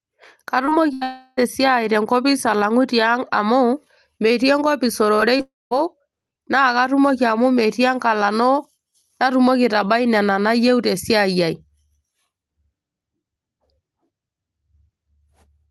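Speech that came through a call link, with audible packet-loss damage in two clusters. Short concealed packet loss appears at 0.65, 0.69, 5.15 and 5.37 s. Each time about 20 ms of audio failed to arrive, and the decoder extended the preceding sound to cover it, leaving a brief smear or wobble with a small piece of speech missing. A burst of packet loss at 0.93 to 1.03 s loses roughly 80 ms in a row. The receiver held the last sound and let it decay, so a short buzz or hiss replaces that stretch before playback skips ahead. It runs straight into a long network dropout from 1.03 to 1.39 s, where about 340 ms is synthesized as a fading continuation rather than real speech. A second dropout from 5.41 to 5.73 s loses about 300 ms. Concealment covers the first part, and the final 200 ms or so is silent before the speech resumes further on. Both dropouts point to a likely interruption of the network stream, not a fault in the source recording.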